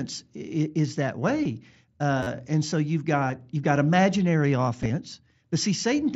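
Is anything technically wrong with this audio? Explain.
Yes, there are two kinds of fault.

Concealed Bluetooth headset packet loss appears at 1.44 s, at 3.28 s just after "and so you've" and just before "you've got imaginary", and from 4.82 to 4.90 s just after "you've got imaginary". The first two are gaps of about 15 ms each. The last is about 37.5 ms of missing audio spread over 75 ms, with the longest stretch around 22.5 ms. Packets between headset and phone were dropped, and the receiver filled each hole by continuing the waveform from the closest-matching recent stretch. That is why the gaps are not heard as silence.

A repeated buffer occurs from 2.23 to 2.27 s, just before "and so you've". A piece about 10.7 ms long plays four extra times, each repeat joined hard to the last, giving a brief stutter or buzz. New audio arrived late, so the device replayed its last buffer instead. 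The repeat length fits a 512-sample buffer, and little or no sound is lost. The mSBC headset codec path, with its 8 kHz ceiling, is heard throughout.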